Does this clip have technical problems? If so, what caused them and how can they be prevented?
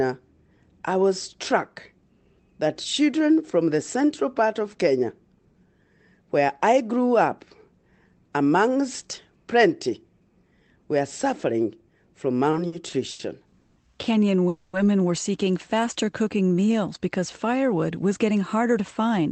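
Yes. Repeated stalls (stutter) run from 12.51 to 13.21 s, right after "were suffering from". Packets arrived late four times, and the receiver stretched the last sound to bridge each gap, filling 180 ms in all, the longest 90 ms, so the phrase drags and judders. A larger, adaptive jitter buffer and a steadier network path would prevent this.

Call audio freezes occur at 13.61 to 13.78 s and 14.48 to 14.75 s. The sound hangs as a fading continuation for 150 ms and then 250 ms before resuming where it stopped, likely because packets were held up long enough to empty the jitter buffer. Prioritising call traffic with QoS and avoiding congested links would prevent it.

A jitter buffer slow-down runs from 15.76 to 16.73 s, between "were seeking" and "because firewood was getting". The receiver repeated single pitch periods to rebuild its reserve, adding 130 ms, so the audio plays at about 87% speed with drawn-out sounds at unchanged pitch. 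Reducing network jitter would keep the buffer from running low.

A jitter buffer speed-up runs from 18.46 to 19.26 s, after "because firewood was getting". With too much audio queued after late packets arrived together, the receiver trimmed pitch periods, removing about 70 ms, so the audio plays at 109% speed and sounds hurried. Smoother packet delivery would avoid these bursts.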